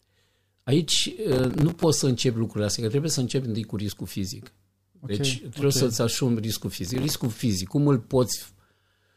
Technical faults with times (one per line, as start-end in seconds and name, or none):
1.32-1.83 processor overload crackle
6.87-7.26 processor overload crackle